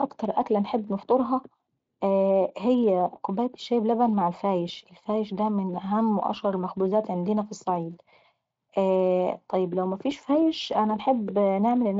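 No technical faults are audible in this recording.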